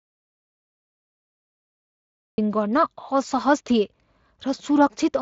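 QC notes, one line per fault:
0.00–2.38 s: audio dropout to silence, under way from the first sample. It is silent with no room tone, unlike a natural pause, likely from a lost input.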